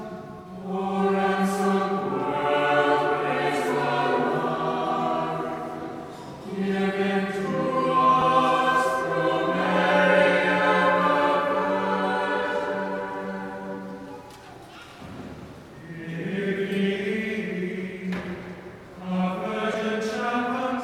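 Lost LE Audio frames at 0.38, 8.21 and 14.74 s (7.5 ms each) and 19.72 to 19.74 s (15 ms): the decoder refills each gap with the last spectrum under random signs, heard as a brief noisy smear.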